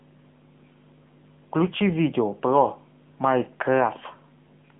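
From start to finish the speech runs through an AMR narrowband mobile codec: the band sits between 150 Hz and 3.5 kHz, nothing passes above 3.8 kHz, and the plainly audible buzzy, synthetic texture (not just a muffled telephone band) points to a low AMR-NB bitrate near 7.95 kbps.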